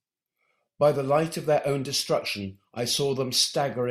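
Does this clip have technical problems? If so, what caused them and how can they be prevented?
No, this clip has no technical problems, so there is nothing to trace back to a cause or to prevent.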